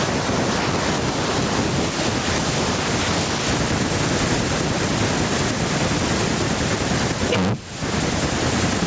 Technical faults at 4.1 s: gain pumping

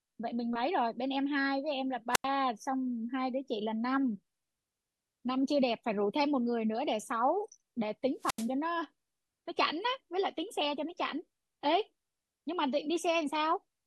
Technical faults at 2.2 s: wireless microphone squelch dropout

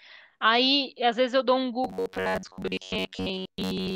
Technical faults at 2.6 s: robotic sound from repeated short buffers

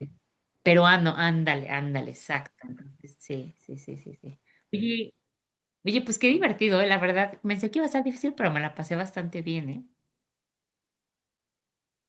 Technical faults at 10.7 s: none

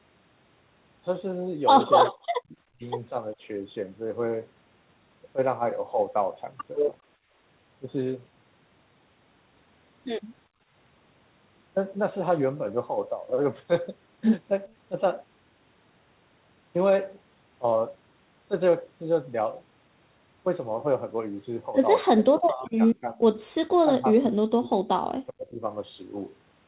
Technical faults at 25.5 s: speech suppressed in double talk

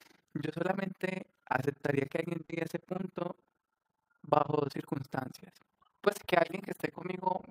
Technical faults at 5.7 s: overlap-add ripple

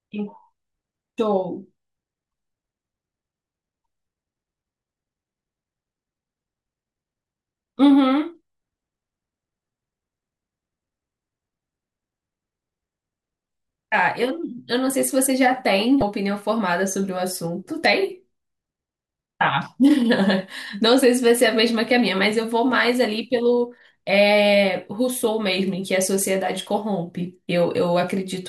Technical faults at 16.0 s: damaged data in a compressed stream

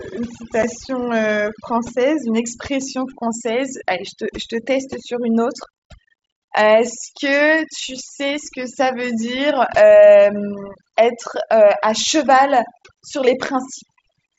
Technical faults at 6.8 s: overdone noise removal

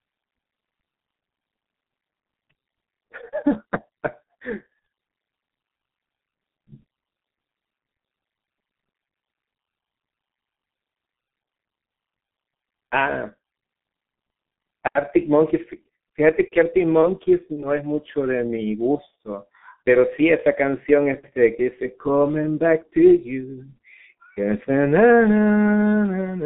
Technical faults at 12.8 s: G.723.1 codec

